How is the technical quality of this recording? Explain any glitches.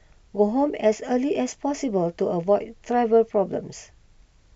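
No glitches or faults are audible.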